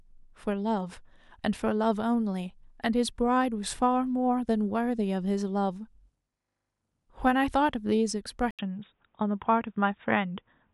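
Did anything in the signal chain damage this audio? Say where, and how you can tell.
Yes: an input switched to a poorer device at 8.51 s, after an 80 ms gap. The speech turns dull, with nothing above 3.8 kHz, likely a driver-level switch to a narrower microphone.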